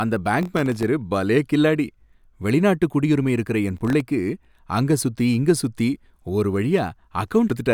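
From 0.41 to 0.83 s, a gritty, tearing crackle rides over the speech, and a shorter burst of the same crackle returns from 3.77 to 4.01 s. This is processor overload crackle. The processor repeatedly failed to deliver its small audio buffers on time, and each missed buffer became a brief hard-edged gap of silence. The fine grain of the crackle suggests buffers well under a millisecond long, with about 20 dropouts in the first burst and about half that in the second.

Between 7.50 and 7.60 s, near the end, a short glitch interrupts the sound. This is damaged data in a compressed stream. Corrupted bytes at that point threw the decoder out of step, so it misread or discarded frames while searching for the next valid frame header, producing the brief glitch in the audio.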